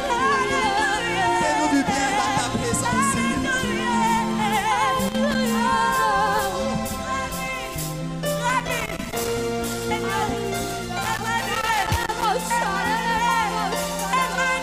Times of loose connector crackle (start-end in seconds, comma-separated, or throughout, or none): 5.07-5.35, 8.49-9.42, 11.02-12.25